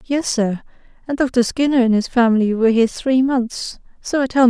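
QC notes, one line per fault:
No faults to note for QC.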